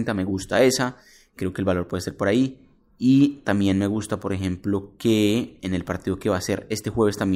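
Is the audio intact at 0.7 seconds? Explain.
Yes, at 0.7 seconds the speech comes through intact, with no audible fault at that moment.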